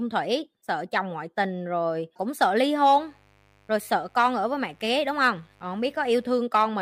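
Sharp switching spikes from a dimmer, rectifier or unshielded cable leak into this speech recording twice per 50 Hz cycle, producing a mains buzz from 2.95 s to 6.39 s, starting just after "rồi cũng sợ ly". The harmonics stack into a steady, raspy buzz that sits well below the speech level.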